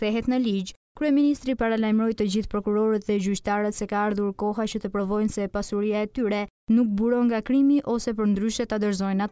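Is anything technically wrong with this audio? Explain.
No, nothing technical is wrong with this audio, and the signal holds steady throughout with no dropouts, distortion, glitches or level problems to be heard.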